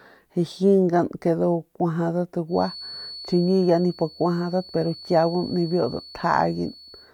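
From 2.46 s to the end, a feedback whistle sits behind the speech: a thin, steady 4.4 kHz tone roughly 20 dB below the signal, swelling and fading slowly in level. The likely cause is a loudspeaker-to-microphone loop held just at the edge of oscillation.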